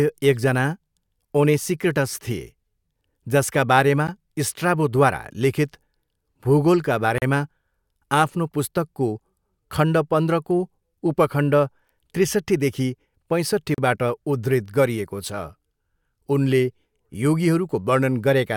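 Brief holes open in the continuous speech: a 12 ms dropout at 4.07 s between "जसका बारेमा" and "स्ट्राबोद्वारा लिखित", then 37 ms at 7.18 s and 36 ms at 13.74 s, each with smeared edges. These are gaps at joins of encoded pieces, where untrimmed encoder start delay and final-frame padding left silence between sections.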